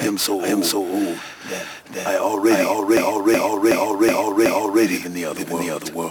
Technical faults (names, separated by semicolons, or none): doubled audio track; system hang loop